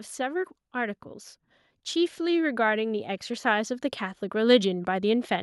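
From 1.93 to 3.80 s, automatic gain rising lifts the speech and background together by about 4 dB; the waveform envelope widens steadily and the spectrogram brightens uniformly.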